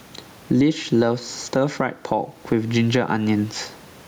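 Gain pumping runs through the whole speech clip. The level is never steady. The swing is large, around 15 dB. The likely cause is a microphone gain set far too high, with a fast limiter or compressor clamping down on every peak. Loud and quiet moments end up close in level. The room noise sits about 37 dB below the speech.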